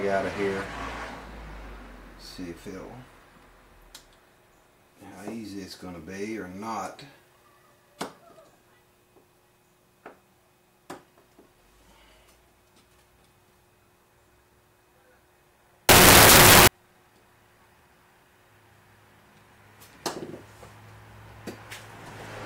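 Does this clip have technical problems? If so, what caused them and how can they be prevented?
Yes. From 15.89 to 16.67 s, samples built from the wrong bytes turn the sound into loud, harsh broadband noise, as misaligned or swapped bytes push the fast-changing low bits into the high part of each value. Prevent it by declaring byte order and sample width explicitly and validating frame alignment at every read.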